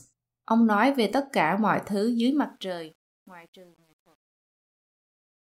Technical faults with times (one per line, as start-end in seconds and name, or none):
2.20-5.49 truncation distortion on a fade